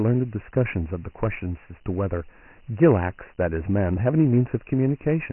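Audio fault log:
throughout: Dialogic VOX ADPCM. Nothing reaches above 3 kHz, which fits 4-bit OKI ADPCM at 6,000 samples a second and a 24 kbps rate. The coarse adaptive step size causes heavy quantisation damage, heard as a gritty hiss that rises and falls with the speech.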